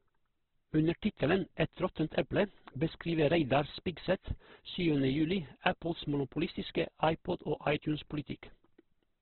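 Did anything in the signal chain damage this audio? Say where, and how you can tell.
Yes. The damage is at the codec stage and runs through the whole speech clip: nothing is present above about 4 kHz, and the remaining band sounds rough and grainy rather than swirly, with harmonics smeared into noise. That points to Opus compression, likely in its CELT music mode at a rate that fits roughly 12 kbps. With so few bits, the encoder narrowed the bandwidth and filled starved bands with folded or noise-like content instead of clean tone.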